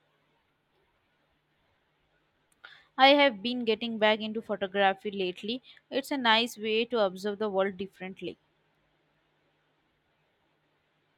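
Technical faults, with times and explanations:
Nothing technical goes wrong anywhere in this bit of speech, so there's nothing to flag.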